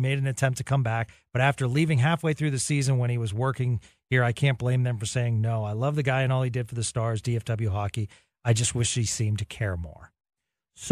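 Listening through the speech recording, nothing stood out as a technical problem at any point.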